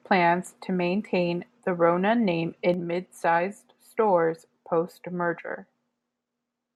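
At 2.74 s a sudden gain jump drops the speech and background noise together by about 4 dB, likely an unramped gain change; the waveform envelope steps down and stays lower.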